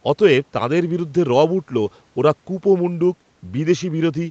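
No faults to report: the speech carries ordinary call-path character, with the microphone processing's trimmed low bass and nothing above 8 kHz, consistent with a wideband Opus link.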